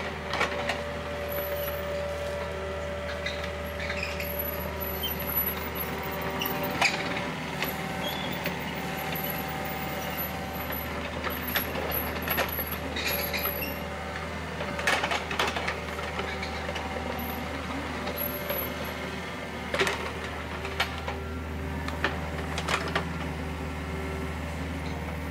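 No technical faults are audible anywhere in this recording.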